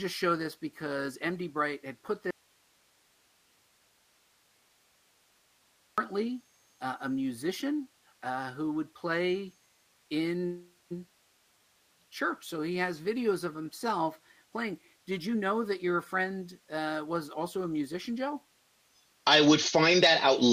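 The audio drops out to a faint residue from 2.31 to 5.98 s, losing about 3.7 s of signal; the gap holds only hiss roughly 40 dB below normal level, likely from a break upstream while the path stayed live. Two short stalls from late packets follow at 9.80 to 9.87 s and 9.95 to 9.98 s, where the sound is held for 44 ms and 16 ms while the jitter buffer waits, with nothing lost. Two call audio freezes occur at 10.46 to 10.93 s and 11.09 to 11.96 s, inserting 444 ms and 858 ms as the last sound trails off into near silence, likely until delayed packets arrive, then resumes without loss. From 15.11 to 19.83 s a jitter buffer speed-up plays the audio at 107% speed at unchanged pitch, trimming about 0.3 s of pitch-period segments to shed the built-up delay and giving a hurried feel.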